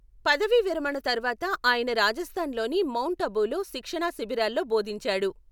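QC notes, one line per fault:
No faults heard in this speech clip. Nothing here needs a QC note.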